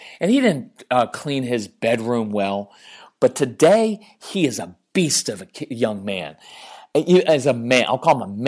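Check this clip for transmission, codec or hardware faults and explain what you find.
No faults can be heard.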